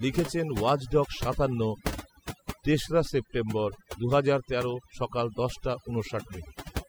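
From start to finish the speech carries overdone noise removal: a noise reducer set far too aggressively has pulled down any frequency band sitting close to its noise estimate, taking the softer parts of the voice along with the noise. The pauses drop to near silence sprinkled with twinkling specks. On a spectrogram the background shows as dark gaps dotted with isolated bright flecks, and voice harmonics look ragged and broken.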